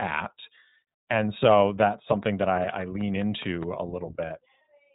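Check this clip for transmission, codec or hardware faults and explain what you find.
Two faults are present: narrowband codec damage across the whole recording, and a burst of regular clicks in the middle.

The iLBC codec is audible throughout. Nothing above 3.9 kHz survives, so the speech sounds boxed-in and slightly rough and synthetic. Each short frame is coded without reference to the previous one, and the character fits 20 ms frames at around 15.2 kbps.

A train of clicks runs from 2.23 s to 3.64 s. About seven near-identical pulses arrive at a steady 5 per second, standing a few dB above the speech as sharp ticking. The likely source is interference from nearby equipment or a faulty connection.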